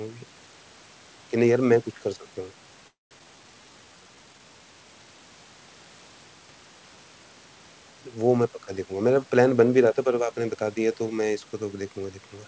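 A speech recording carried over a call, with its audio band ending at 8 kHz, which fits a wideband codec such as G.722. From 2.88 to 3.13 s the sound stretches into a fading buzz, then about 170 ms of silence, before resuming where it stopped. This is a call audio freeze, likely from packets held up until the jitter buffer ran dry. Nothing is lost, which separates it from a skip. Right after, at 3.19 to 3.21 s, comes a skip ahead: roughly a fifth of a second of speech is dropped and the two sides are joined almost directly, with no gap. From 3.24 to 4.40 s a jitter buffer slow-down runs the speech at 85% speed while the pitch stays the same. Repeated pitch periods add 176 ms and draw out the sounds, unlike a freeze's decaying buzz. From 8.45 to 10.63 s a jitter buffer speed-up runs at 110% speed, trimming roughly 200 ms of short pitch-period pieces. The speech sounds hurried but keeps its pitch, with no audible jump like a skip.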